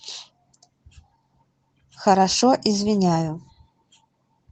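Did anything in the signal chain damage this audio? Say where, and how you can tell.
No, nothing in the chain damaged this speech: it went through Opus voice compression, and the full band and only light coding texture point to a hybrid mode at a moderate rate around 20 kbps working as intended.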